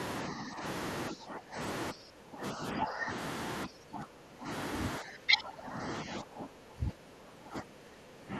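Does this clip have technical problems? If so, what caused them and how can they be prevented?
Yes. The speech keeps dipping in level at 0.28–0.63 s, 1.1–1.59 s, 1.92–3.11 s, 3.66–4.49 s, and from 4.99 s to the end. The drops run from about 10 dB to about 20 dB, deepest in the third stretch. This is likely speech suppressed in double talk: with both sides talking, the echo canceller mistook the near talker for loudspeaker echo and turned everything down. Unlike packet-loss dropouts, these are long, uneven ducks rather than short, clean gaps. Using a headset, or an echo canceller with better double-talk detection, prevents it.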